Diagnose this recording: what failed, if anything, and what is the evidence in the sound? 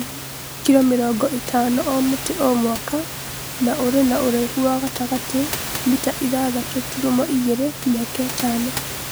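Nothing failed in this recording; the only thing to hear besides the speech is the room's own background noise, about 10 dB below it.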